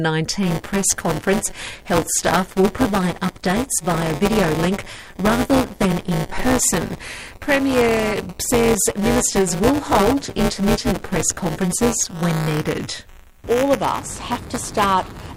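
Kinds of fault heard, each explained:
Buffer tearing: From 0.43 s to the end, a steady robotic rattle at 188 Hz rides on the sound, present only while there is signal. The writing program and the playback hardware have slipped out of step, so they cross inside every buffer period, a rate that fits a 256-sample buffer. A slice of roughly a sixth of each buffer holds audio about ten milliseconds old, and the hard joins on either side repeat as the buzz.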